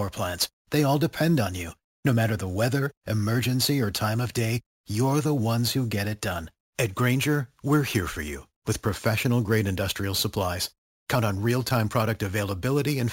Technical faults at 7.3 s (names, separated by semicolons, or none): imaging from sample-and-hold upsampling